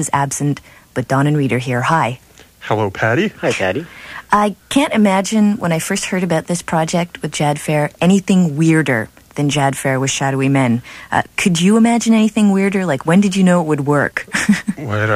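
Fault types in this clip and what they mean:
No technical faults can be heard in this audio.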